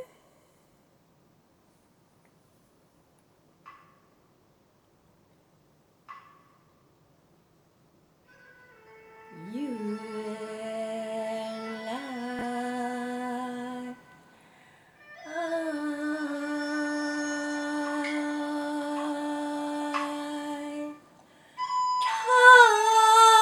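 Chunks out of order at 12.39 to 12.42 s: a 10 ms chunk landed two chunks late, so it plays after the two chunks that should follow it. Nothing goes missing, but the sound jumbles briefly across the three hard joins.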